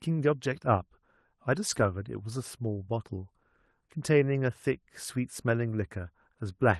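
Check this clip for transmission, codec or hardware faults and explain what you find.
There's one fault here, a lost packet rebuilt from error correction, between 1.69 and 1.83 s in this speech. Four separate packets went missing, and the decoder filled roughly 80 ms from the low-bitrate copies carried in the following packets. So there's no gap, just a brief stretch that sounds rougher and noisier. The Opus call path, running at 32 kbps with the top end capped around 12 kHz, shapes the sound throughout.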